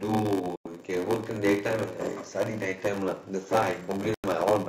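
Block size mismatch (padded) runs throughout. Each block read downstream is only partly filled and padded with zeros, which fits 512-sample reads. This gives a 93.8 Hz buzz, and the speech runs at 0.861 times normal speed.

Digital broadcast dropouts occur at 0.56–0.66 s and 4.14–4.24 s. The receiver muted after losing frames, which points to a few failed frames each time, leaving roughly 0.1 s holes of silence where that speech is gone.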